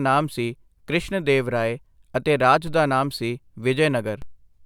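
It's a speech clip with two DC steps, one at 2.67 s, right after "ਦੇਵ ਰਾਏ ਅਤੇ ਰਾਜ", and another at 4.22 s. Each time, the zero line suddenly jumps by about −26 dBFS, giving a low thump or click, then drains away slowly through a roughly 2 Hz high-pass.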